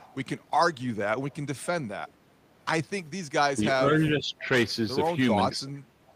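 A likely echo leak, where the far end's loudspeaker echo slipped past its canceller, returns a faint copy of the speech about 429 ms late, roughly 30 dB down from 0 to 0.15 s and even quieter at 1.29 to 1.37 s and again at 6.07 to 6.14 s. Between those, speech suppressed in double talk, likely from the canceller mistaking overlapping talk for echo, pulls the speech level down by a few dB at 3.56 to 3.62 s and 5.5 to 5.59 s, and by around 10 dB through much of 3.78 to 4.47 s.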